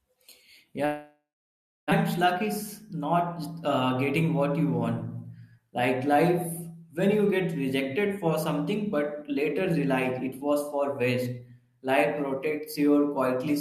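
At 0.85 s the speech cuts out. The last sound smears into a fading buzz, then 0.63 s of near silence. Speech returns at 1.94 s, a second of it lost and timing slightly shifted. This is likely a long network dropout.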